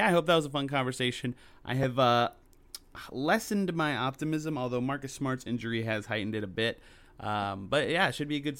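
Right after "a fun conversation I", at about 1.83 s, there's a repeated buffer. New audio didn't reach the output in time, so the device replayed the chunk it already had, twice over, so the piece plays three times back to back with hard joins. Each chunk is only about 2.67 ms, which fits a 128-sample buffer, so it comes across as a tiny click or buzz rather than a stutter. Essentially no speech goes missing.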